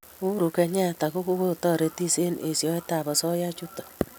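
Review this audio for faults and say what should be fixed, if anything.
Nothing needs fixing, as the speech signal shows no technical faults anywhere in the recording.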